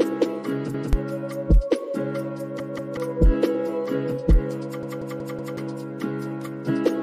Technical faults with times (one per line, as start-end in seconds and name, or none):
0.74-0.93 repeated buffer
2.60-2.97 repeated buffer
4.83-5.57 repeated buffer